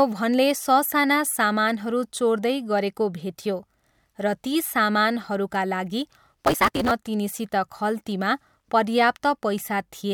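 From 6.44 to 6.91 s there's a block size mismatch, truncated: each block gets its tail chopped, so you hear a 172 Hz buzz and the speech rushing along about 1.88 times faster at roughly normal pitch, which fits a 256-sample read.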